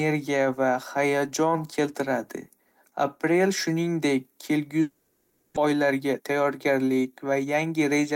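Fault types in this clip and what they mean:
Long network dropout: The speech breaks off at 4.81 s and is replaced by about 0.75 s of fading concealment buzz or hiss with no true silence, likely from a stretch of packets that never arrived. It resumes at 5.58 s with roughly 0.4 s of content missing.
Jitter buffer speed-up: From 5.66 s to 8.12 s the speech runs at about 113% speed with unchanged pitch and sounds hurried. The receiver trims short pitch-period slices in succession, shedding roughly 0.3 s of backlog.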